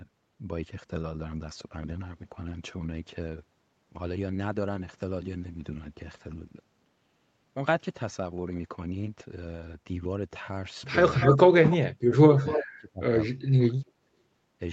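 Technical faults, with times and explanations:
11.14–11.37 s, 11.70–11.77 s and 12.35–12.66 s, echo leak: a delayed copy of the speech returns 241 ms after the original, strongest in the first scrap at about 5 dB below the speech, then about 20 dB and about 10 dB below. It is likely residual echo that a loudspeaker-side echo canceller failed to remove and sent back. On a spectrogram the harmonic patterns repeat, shifted right by roughly a quarter second. The waveform shows duplicate envelopes trailing the main ones.
11.43–11.69 s and 12.41–14.07 s, speech suppressed in double talk: the speech dips sharply, by roughly 30 dB at its deepest in the first stretch and roughly 35 dB in the second. About 0.2 s is affected in the first and about 1.5 s in the second. This is likely an echo canceller that could not tell near speech from loudspeaker echo and attenuated both. The waveform envelope collapses in patches, and the spectrogram shows energy thinning or vanishing.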